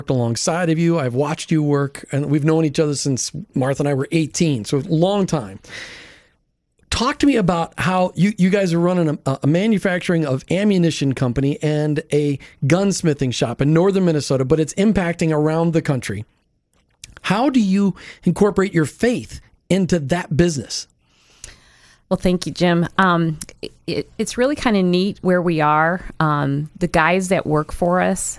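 No technical faults are audible anywhere in the speech recording.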